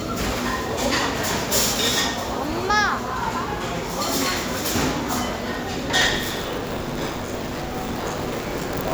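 From 6.01 s to the end, buffer tearing sets in: writer and reader have slipped, so about half of each 10 ms period replays audio roughly 40 ms stale. The hard joins give a 100 Hz robotic rattle, visible as steps every 10 ms and stripes at 100 Hz multiples.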